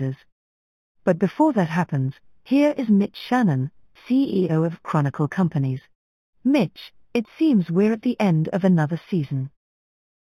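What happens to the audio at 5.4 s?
At 5.4 s the speech has a dulled top end with a faint, light metallic shimmer riding on sibilants. That is imaging from linear upsampling, and it is present for the whole clip rather than just this moment. The sound points to audio that began at an 8 kHz rate and was raised to 44.1 kHz by joining samples with straight lines. That weak filter leaves a mirrored copy of the spectrum between 4 kHz and 8 kHz, roughly 30 dB below the signal.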